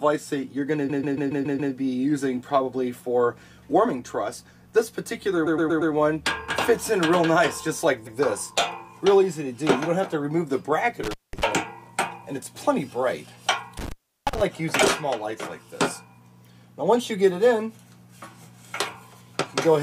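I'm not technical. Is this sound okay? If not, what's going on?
No. Two faults are audible. First, repeated frames: a short stretch of the recording got copied more than once, so the same snippet replays back to back, heard as a stutter. It happens at 0.88 to 1.72 s (a 0.14 s piece played six extra times), 5.46 to 5.92 s (0.12 s, four extra times) and 8.06 to 8.18 s (one extra play).

Second, intermittent contact: a loose cable or plug briefly lost connection. The sound cuts out with a crackle at each edge, leaving only faint hiss, at 11.04 to 11.44 s (a gap of about 0.19 s) and 13.77 to 14.41 s (about 0.35 s).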